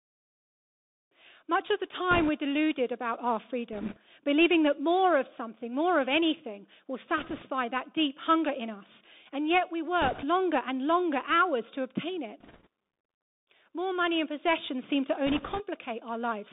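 The whole clip sits inside a Bluetooth CVSD headset codec. The speech is squeezed into a phone-style band of roughly 200 Hz to 3.7 kHz, which fits a 64 kbps CVSD link. The damage is plainly audible. The one-bit delta coder can't keep pace with loud, bright moments, so its adapting step lags and distorts them. S sounds come out scratchy, and a grainy hiss rides under everything.

On top of that there are six short bursts of bit errors on the Bluetooth voice link, each a few percent of bits flipped. The first runs from 2.11 to 2.30 s, right after "of the" and before "deluded about our." The next ones fall at 3.73–3.98 s and 7.18–7.44 s. Another sits at 10.02–10.25 s, between "yet we" and "longer and longer hours," and one more at 12.40–12.67 s. The last runs from 15.27 to 15.64 s, just after "and possessions seem to." Because no CVSD bit outweighs the others and the errors fade quickly, none of these bursts clicks. 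Each sounds like a quick rushing crackle washing over the speech.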